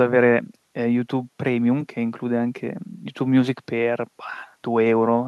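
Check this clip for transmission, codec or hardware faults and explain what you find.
No faults can be heard anywhere in the speech. There is nothing here that calls for further explanation.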